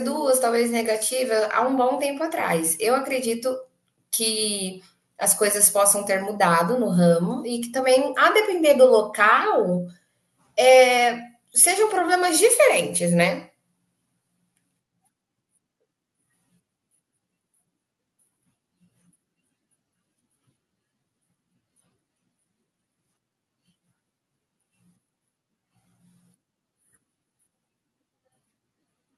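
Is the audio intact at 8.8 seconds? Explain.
Yes, the speech runs through 8.8 seconds with no dropout, click, distortion or other fault audible at that point.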